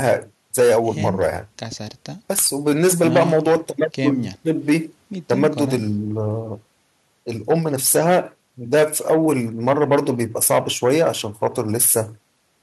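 Speech recording, no technical faults detected.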